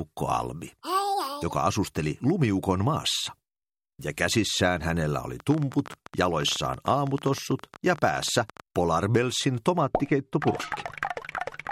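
From 5.40 s to 8.61 s a train of clicks rides over the sound: around fifty near-identical sharp pulses at an irregular pace averaging 15.6 per second, peaking a few dB above the programme and audible as an uneven ticking even in quieter moments. The cause is likely interference from nearby equipment or a faulty connection or power supply injecting the same pulse repeatedly. A waveform shows a scatter of thin spikes poking above the envelope, and a spectrogram shows matching thin vertical lines spanning the full frequency range.

From 9.81 s to the end, de-emphasis has been applied wrongly: a treble cut meant to reverse pre-emphasis has been applied to audio that had none, or applied twice. The response slopes down smoothly so that 10 kHz sits about 14 dB below 1 kHz, leaving the sound dull and muffled, as if heard through cloth. A spectrogram shows the upper bands fading gradually rather than stopping at a hard edge, and the waveform looks rounder, with softened transients.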